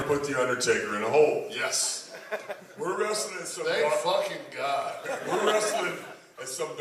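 From 1.49 to 1.86 s, zipper noise appears. The level drops roughly 10 dB in unsmoothed 1 dB steps, about twenty per second. Each step ticks audibly.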